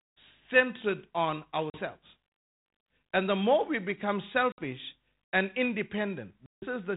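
At 1.7, 4.52 and 6.46 s the speech drops into hard-edged silent gaps of 40, 60 and 160 ms. This is packet loss on an ADPCM call. The decoder's predictor loses track, so the speech resumes with brief, slight distortion.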